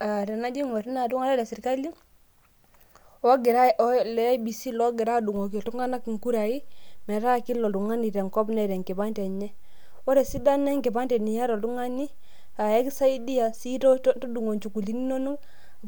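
At 5.36 s, just after "leiebc logira", a DC step shifts the waveform's zero line and the offset holds to the end, heard as a single low thump.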